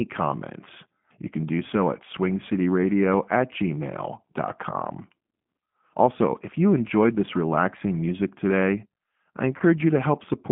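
Throughout the clip the speech carries plainly audible G.729 codec damage. The line passes roughly 150 Hz to 3.4 kHz, and the 8 kbit/s coder rebuilds each frame from a vocal tract filter, a pitch predictor and a few pulses, so voiced sounds come out rough and slightly synthetic.

From 9.58 to 9.63 s, just after "relaxing music today I", there is VoIP packet loss concealed by the speech codec. About 20 ms of audio went missing, which fits a single lost packet. The decoder filled the gap by repeating its last pitch and filter at falling gain, which gives a brief stretched sound that fades. The distortion carries a little past the gap while the decoder state recovers.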